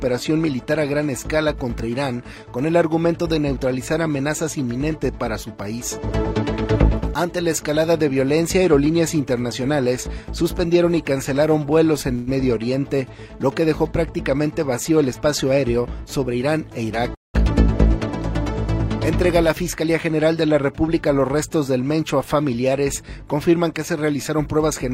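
The audio twice stalls in a call audio freeze: at 12.15 to 12.29 s the last sound is stretched for 116 ms as a fading buzz or hiss, and at 17.15 to 17.36 s a 195 ms fill fades into about 170 ms of silence. Each time, playback resumes exactly where it stopped, likely because delayed packets left the jitter buffer empty. Three jitter buffer speed-ups then make the sound run hurried at unchanged pitch: 14.90 to 16.58 s at 108% speed, cutting roughly 150 ms; 19.42 to 20.10 s at 106%, cutting about 50 ms; and 24.28 s to the end at 108%, cutting about 70 ms. Each comes from the receiver trimming short pitch-period pieces to shrink an overfilled buffer.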